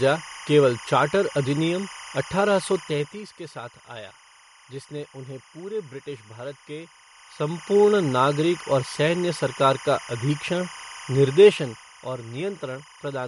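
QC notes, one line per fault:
throughout, timecode bleed: a steady chirping warble sits roughly 20 dB under the speech, flipping between tones near 1 kHz and 2 kHz. Linear timecode running at 25 frames per second is leaking in from an adjacent track or cable, its square-wave code audible as that two-pitch chatter.
throughout, MP3 compression: the speech sounds watery and swirly, sibilants carry metallic chirps, and nothing is present above 11.2 kHz. This is likely a starved MP3 encoder, consistent with a bitrate near 48 kbps, cutting the treble and dropping quiet spectral lines that flicker between frames.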